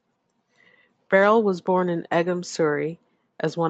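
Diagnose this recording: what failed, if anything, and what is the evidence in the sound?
Nothing failed in this recording.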